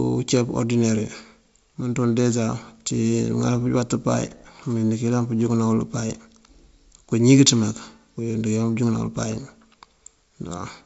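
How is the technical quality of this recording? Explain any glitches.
The technical quality of this speech recording is sound, with no glitches to explain, as it comes through G.722 wideband telephone coding at 64 kbit/s as expected.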